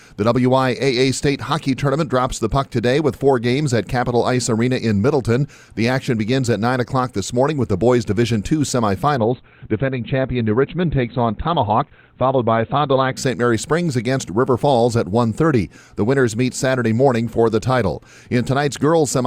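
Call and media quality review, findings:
Adaptive stream at a lower bitrate, 9.17–13.17 s: treble abruptly dulls, codec artefacts thicken, then full quality snaps back. Player switched renditions on a slowed connection; the sound fits Opus near 12 kbit/s. Seamless changeover with no gap, unlike packet loss.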